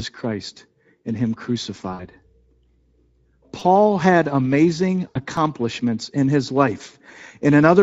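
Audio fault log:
Throughout, Speex codec: the speech has a plainly audible hoarse, grainy edge. That fits a Speex stream at about 16.8 kbps. At that rate the CELP coder has few bits left for the excitation, so the voice comes out noisy and a bit rough. The top end also sounds like a shaped noise fill.
1.93 to 2.03 s and 5.07 to 5.21 s, VoIP packet loss concealed by the speech codec: around 60 ms and then 80 ms of audio went missing, which fits three and four lost 20 ms frames. The decoder filled each gap by carrying on from its last pitch and filter, so you hear the sound stretched out and fading. The voice stays weak for a moment after each gap.
3.60 to 3.61 s and 5.36 to 5.37 s, repeated buffer: in both spots a tiny slice of about 5 ms was played again, three extra times at the first and twice at the second. The repeats are too short to hear as a stutter. What you get is a quick click or a little buzz with hard joins, because fresh audio didn't arrive in time.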